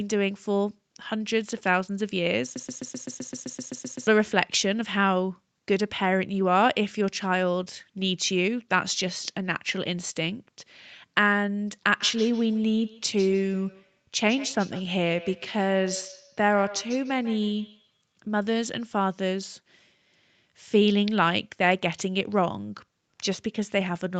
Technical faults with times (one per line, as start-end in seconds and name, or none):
2.56-4.07 broken-record loop
11.97-18.17 feedback echo between two devices